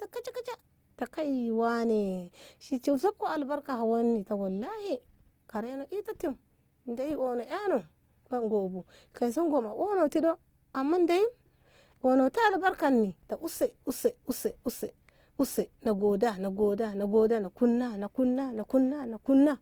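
Opus compression likely affects this speech throughout. Band-filling in its music mode makes tones grainy and rough, fitting about 24 kbps, though content still reaches 20.2 kHz.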